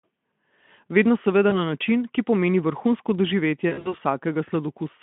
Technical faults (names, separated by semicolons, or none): VoIP packet loss concealed by the speech codec